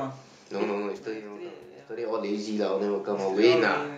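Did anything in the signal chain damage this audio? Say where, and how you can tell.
No, nothing in this speech recording stood out as damage from the signal chain on listening.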